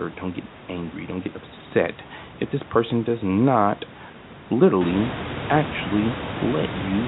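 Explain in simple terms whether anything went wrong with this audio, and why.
One thing went wrong, at 1.24 to 1.26 s, just before "upset if this person": packet loss with last packet repeated. A small piece of the sound went missing in transit, and the receiver filled the 20 ms gap by playing the previous piece again. The result is a small blip rather than a moment of silence, and that replay is what sets it apart from a plain dropout. Because only one piece was lost, it never builds into a longer robotic buzz. The background room noise, which grows louder from around 5 s, comes from the recording space and is not a fault.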